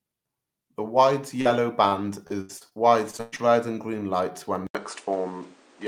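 At 1.41 s there is a short concealed packet loss. About 40 ms of audio never arrived, and the receiver stretched the preceding sound to cover it, leaving a brief smear.

From 1.89 to 2.73 s, repeated packet loss sets in. The longest gap is 81 ms, and about a fifth of the stretch is patched, so the audio turns choppy and robotic. It returns from 3.11 to 3.40 s more heavily, with gaps up to 115 ms and over half concealed.

At 4.67 s an 80 ms silence is followed by duller, boxier sound. Nothing remains above 9.9 kHz. The level shifts by around 5 dB, and new background noise sits roughly 30 dB down. This is likely the input switching to a poorer device.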